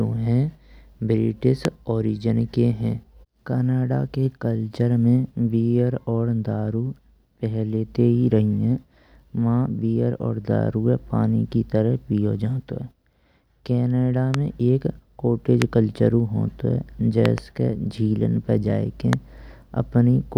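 Loud pops strike the speech at 1.65, 14.34, 15.62 and 19.13 s, with a double pop from 17.26 to 17.40 s. Each is a sharp thump standing about 15 to 20 dB above the voice, likely a sudden voltage pulse from a plug, switch or static discharge.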